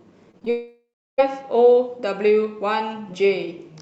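Short concealed packet loss hits at 0.31–0.35, 0.39–0.43 and 0.45–0.48 s: brief smeared, wobbly patches where missing audio was extrapolated, showing as blurred harmonics on a spectrogram. A long network dropout, likely, follows from 0.50 to 1.20 s: a fading buzz or hiss, then about a third of a second of flat waveform before speech resumes.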